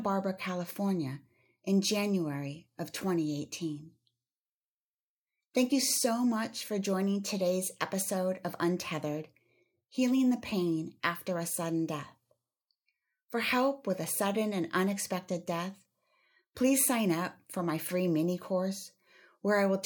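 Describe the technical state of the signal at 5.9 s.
A sharp tick cuts through the speech at 5.92 s. It is a block of digital silence only 0.44 ms long: the signal drops abruptly to zero and returns with no fade, so both edges collapse into a single click rather than an audible hole.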